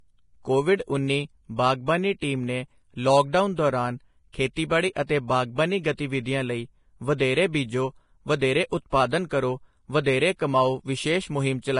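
Throughout the speech, treble turns hissy and grainy and consonant onsets blur, likely from heavy Vorbis compression at a low rate near 30 kbps. Coarse high-band quantisation swaps detail for noise; a spectrogram shows smeared speckle and nothing above 10.5 kHz.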